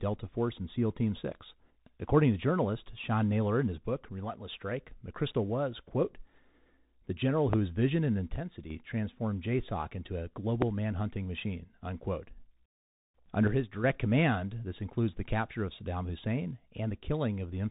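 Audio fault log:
throughout: Bluetooth CVSD headset codec. The audio has passed through a one-bit delta modulator whose adaptive step, which fits a 64 kbps link, cannot keep pace with loud, bright passages. Nothing passes above 3.8 kHz, sibilants turn scratchy, transients distort, and a granular hiss lies beneath the speech.
7.53–7.55 s and 10.62–10.64 s: loud pop. A sudden voltage spike, likely from a switch, plug or driver glitch, enters the signal, once after "the general" before "vision and" and once after "into a" before "manhunting machine unquote". Each is a single sharp pop roughly 20 dB above the speech, which continues underneath.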